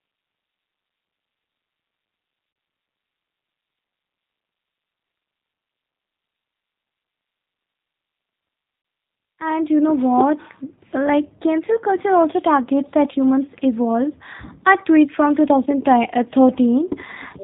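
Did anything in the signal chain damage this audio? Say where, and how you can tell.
Yes. The speech sounds rough, slightly synthetic and dull, with nothing above 4 kHz. That fits the G.729 codec at 8 kbit/s, rebuilding the voice from a filter, pitch and sparse pulses.

At the network stage, the audio briefly smears into a buzzy tone or coloured noise that fades, at 2.53 s and 8.82 s, about 30 ms each. This is VoIP packet loss concealed by the speech codec, which fits a single lost packet each time.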